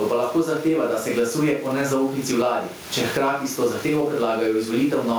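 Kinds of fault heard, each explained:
gain pumping: Gain likely set far too high, with a fast limiter clamping each loud syllable, so the gain swings about 15 dB and speech sounds squashed.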